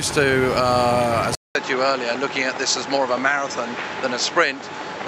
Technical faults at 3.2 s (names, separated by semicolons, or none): input switched to a poorer device